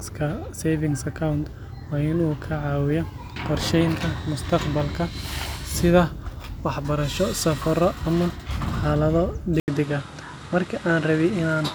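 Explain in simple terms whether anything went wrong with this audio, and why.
At 9.60 s, after "waxbarasho safarro ama xaalado", a brief gap, then duller, noisier sound: likely an input switched to a poorer device. Unlike a dropout, the change lasts to the end.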